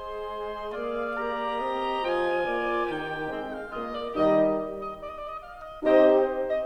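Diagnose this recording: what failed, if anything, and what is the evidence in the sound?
Nothing stood out on listening to this music recording, and no stage of the chain shows a failure that can be heard.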